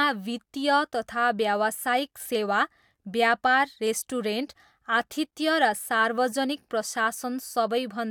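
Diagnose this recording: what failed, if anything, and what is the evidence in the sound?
Nothing in this speech recording stood out as a fault on listening.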